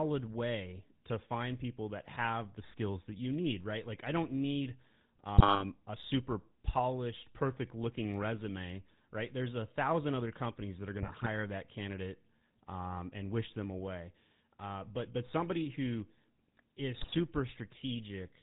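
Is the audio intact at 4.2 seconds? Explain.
No. At 4.2 s, as throughout the clip, GSM full-rate codec damage is plainly audible: regular-pulse excitation and a 4 kHz ceiling give the speech a buzzy, gravelly roughness.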